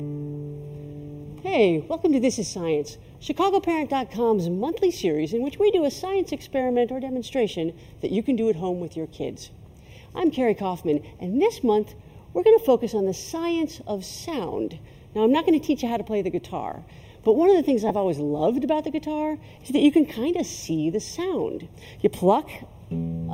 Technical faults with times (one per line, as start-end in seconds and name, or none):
0.00-23.34 channel delay (comb filtering)
17.89 lost LE Audio frames
19.56 lost LE Audio frames
22.54 lost LE Audio frames